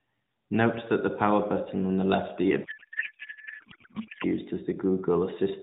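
After "button on the left", from 2.64 to 4.25 s, a codec payload misread turns the speech into garbled warbling noise, which points to octet-aligned AMR frames being unpacked as bandwidth-efficient. On a spectrogram, harmonic striations give way to smeared, structureless energy under the 4 kHz AMR ceiling, and the waveform loses its syllable envelope.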